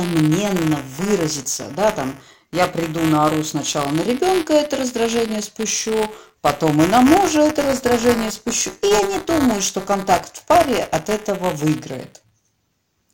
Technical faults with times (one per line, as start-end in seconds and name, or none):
0.00-13.13 buffer tearing